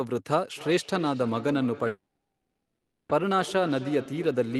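From 0.52 s to the end, each stretch of speech returns about every 0.3 s, thinner and ringing, up to about 15 dB below the voice: feedback echo between two devices, where one device replays the other's sound into that microphone.

At 1.87 s the sound trails off into a fading buzz, with silence of about 40 ms by 3.13 s. About 0.74 s of speech never returns, which points to a likely long network dropout that left roughly half a second of extra delay.

From 3.23 s to 4.41 s the speech sounds hurried at unchanged pitch, about 6% fast. This is a jitter buffer speed-up that trimmed roughly 70 ms of pitch periods to cut the built-up delay.

Throughout, the Opus call path limits the audio to about 12 kHz.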